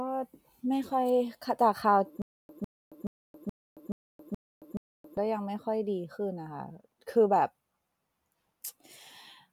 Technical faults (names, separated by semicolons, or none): stutter with silent gaps